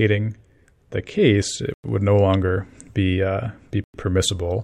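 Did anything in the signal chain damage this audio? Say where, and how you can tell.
Yes, there's a gap between chunks at the storage or playback stage. The speech drops out cleanly from 1.74 to 1.84 s and again from 3.84 to 3.94 s: two 100 ms holes with hard edges, 2 s apart, so each chunk is followed by dead air before the next one starts.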